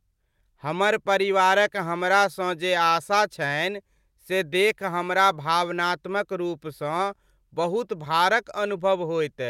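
Clock drift between sender and receiver runs through this speech clip: the sender's clock is roughly 1.5 percent slow, so the receiver's buffer keeps draining and must be topped up to avoid running dry. Repeated timing corrections follow from 0.12 s to 9.43 s. The receiver repeats short slivers of audio at uneven intervals, always lengthening, adding around 150 ms in total. Playback runs at about 98 percent speed, heard as faint hiccups and a slightly unsteady, dragging tempo.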